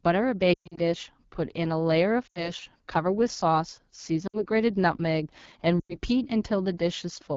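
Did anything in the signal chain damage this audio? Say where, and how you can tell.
Yes. At the codec stage, the whole clip was carried as AMR wideband (HD Voice) at 8.85 kbit/s, the second-lowest rate this codec offers. At that rate the pulse-driven vocal tract model has too few bits to describe the excitation properly. The speech comes through plainly rough and raspy throughout. The top band, from 6.4 to 7 kHz, is filled with shaped noise rather than real detail, adding a hissy edge.

At the network or radio stage, lost AMR speech frames hit the signal at 0.54 to 0.80 s, 2.27 to 2.50 s, 4.27 to 4.43 s and 5.79 to 5.96 s. The first is the worst, with gaps scattered across about 240 ms and one unbroken run of 120 ms. The decoder repeats the last good pitch and tract settings at falling gain, so the speech smears, warbles and quickly fades toward silence before returning weak and rough.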